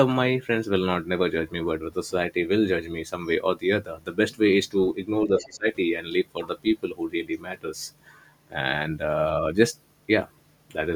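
Between 5.27 and 5.67 s, an echo canceller that could not tell the near talker from loudspeaker echo while both sides spoke likely turned everything down, giving speech suppressed in double talk: the speech dips by roughly 15 dB, in broken patches adding up to about a third of a second.

Inside that window, from 5.39 to 5.49 s, echo cancellation likely left some of the loudspeaker signal in the microphone, so the other side's voice leaks through as a brief scrap of a second voice sitting about 15 dB below the main speech.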